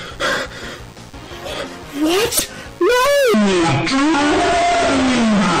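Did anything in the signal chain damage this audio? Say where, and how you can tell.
Yes. A DECT cordless phone buzz sits under the whole clip, picked up in the analogue wiring. It is a steady, thin 100 Hz buzz rich in harmonics, about 30 dB below the signal. A nearby handset or base sends radio bursts every 10 ms, and the circuitry rectifies them.

From 2.37 to 2.41 s there is a brief glitch. That points to damaged data in the compressed stream, at the codec or storage stage. The decoder hit corrupt frames, lost sync and resumed at the next good header.

From 3.34 s to the end, the audio plays at 0.56 times normal speed. Pitch drops by roughly ten semitones, and everything turns deep and slow. This section at the wrong speed is likely a playback or editing step running it against the wrong clock.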